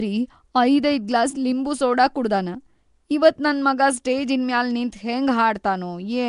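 From start to finish the speech carries a rough, hissy halo and a smeared, underwater quality, with nothing above 10.6 kHz, most likely Nellymoser compression from the old Flash microphone codec. It spends a fixed two bits per sample on 256-sample blocks, so weak bands get no bits and are filled with noise. The damage is plainly audible and fits a rate near 44 kbps. Unlike MP3's warbling, the texture here is grainy noise.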